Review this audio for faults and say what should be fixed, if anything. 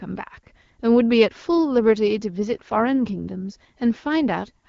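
From 2.54 to 3.62 s there's an AMR rate drop. The bandwidth holds and nothing cuts out, but the speech goes rougher and more synthetic, consistent with the AMR-WB link stepping down from 12.65 to about 8.85 kbit/s and spending bits on error protection. Improving radio coverage or signal margin would keep the codec at its higher rate.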